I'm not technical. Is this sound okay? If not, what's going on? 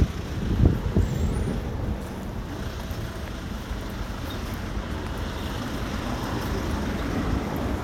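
Yes, nothing wrong can be heard anywhere in this recording.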